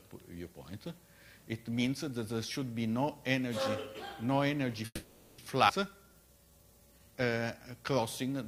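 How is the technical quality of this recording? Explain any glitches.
Three network-timing glitches disturb the second half of the recording.

From 4.85 to 5.40 s, a call audio freeze: the last sound lingers as a fading buzz, then about 40 ms of silence. A stalled jitter buffer is the likely cause. Nothing is lost, which sets it apart from a skip.

From 5.68 to 5.71 s, a skip ahead: roughly 200 ms of audio is dropped, and the two sides are joined almost directly, with no held tone.

From 5.90 to 7.35 s, a jitter buffer slow-down: repeated pitch periods stretch the sound to 85% speed, adding 230 ms. Pitch stays unchanged, unlike a freeze's buzz.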